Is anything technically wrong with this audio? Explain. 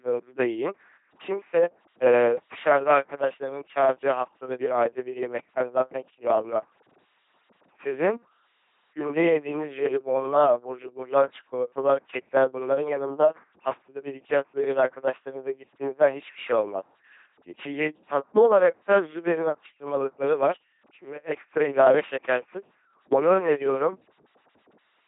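Yes. The whole speech clip has passed through an LPC-10 vocoder, and the damage is heavy. Each moment is rebuilt as either a pulse train or noise through a short filter. So the sound is a buzzy robot tone with misplaced hiss, fitting about 2.4 kbit/s. Nothing remains above 3.7 kHz.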